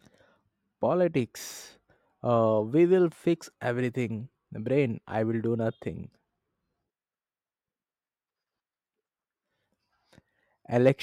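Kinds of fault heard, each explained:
No technical faults can be heard in this speech recording. Nothing in the audio calls for a fault to be described.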